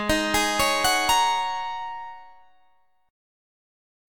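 No technical faults can be heard anywhere in the audio, which holds steady and intact throughout.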